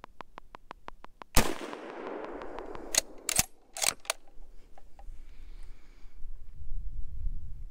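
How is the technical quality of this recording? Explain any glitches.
The recording has one clear glitch near the start. From 0.04 s to 2.76 s a train of clicks runs at a regular 5.9 per second, around fifteen near-identical pulses peaking about 10 dB above the sound, likely from electrical interference or a faulty connection. It ticks steadily, and shows as evenly spaced thin vertical lines on a spectrogram and sharp spikes on the waveform.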